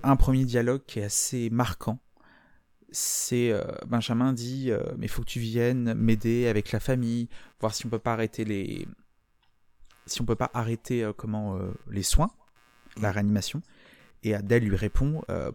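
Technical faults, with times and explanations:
Throughout, computer activity noise: faint buzzing pulsing around a hundred times per second, tracking computer load through the shared ground, unlike steady mains hum.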